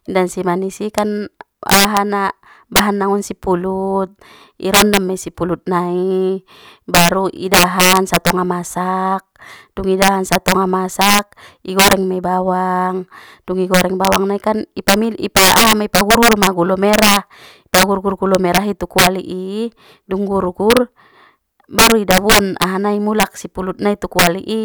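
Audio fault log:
Throughout, integer overflow: loud speech peaks driven about 14 dB past full scale wrap to the opposite sign, giving violent cracks on a small fraction of samples.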